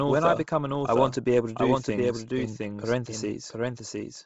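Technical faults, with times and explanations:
Throughout: doubled audio track. A second full-band copy of the speech trails the original by about 0.7 s, roughly 5 dB quieter, with no decay or room colour. It is likely the same signal captured again through a slower path and mixed back in.
Throughout: Bluetooth LC3 compression. The speech has a heavy breathy, grainy edge and nothing above 7.7 kHz, because much of the upper spectrum is zeroed and filled with noise. This is likely LC3 coding at a low rate, fitting 24 kbps with 7.5 ms frames.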